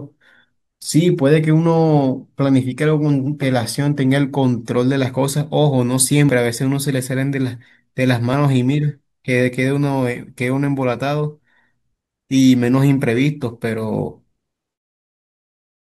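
Speech with a single jump at 6.29 s where the audio skips ahead by about 20 ms, most likely a dropped buffer (overrun). The waveform shows an abrupt discontinuity without any gap, and the spectrogram a thin vertical broadband line at the splice.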